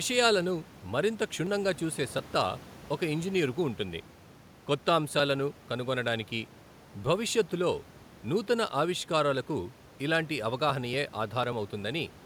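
The speech signal shows no technical faults, with the room's background noise sitting about 20 dB below the speech as part of the recording itself.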